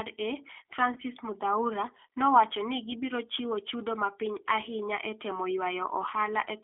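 All the way through, the speech has that rough, slightly synthetic G.729 codec sound, squeezed into roughly 300 Hz to 3.5 kHz, which points to an 8 kbit/s VoIP link. From 0.94 to 0.98 s there's VoIP packet loss concealed by the speech codec: about 20 ms went missing, which fits two lost frames, and the decoder stretched the last sound into a brief buzzy or noisy, fading patch.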